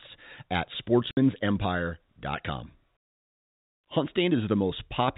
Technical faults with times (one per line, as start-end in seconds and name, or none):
1.11-1.17 packet loss filled with silence